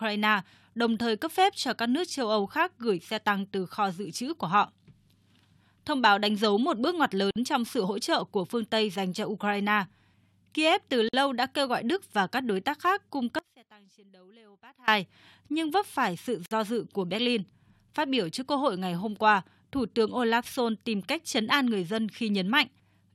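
Gap at a join of encoded pieces at 7.31 s, between "dấu một bước ngoặt" and "trong sự hỗ trợ", and again at 11.09 s, just before "đã kêu gọi". Separately encoded segments were joined without trimming their padding, leaving about 50 ms of silence with abrupt, slightly smeared edges before the speech resumes.

Audio dropout to a faint residue from 13.39 to 14.88 s. The speech cuts out abruptly for 1.49 s, leaving only a faint sound about 25 dB below the signal, likely because the signal was lost while the path after the break stayed live.

A third gap at a join of encoded pieces, 52 ms long, falls at 16.46 s, between "nhưng vấp phải sự" and "do dự của".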